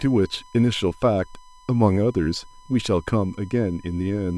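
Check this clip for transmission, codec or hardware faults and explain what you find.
One fault runs through the whole clip: USB whine, a steady tone at 1 kHz, about 30 dB below the speech. The bus carrying the audio draws current in regular 1 ms frames, and those pulses leak into the analogue path through the shared power or ground. Because the frame rate never changes, the result is a thin, fixed-pitch whine that sits under the speech from start to finish, easiest to hear in the pauses.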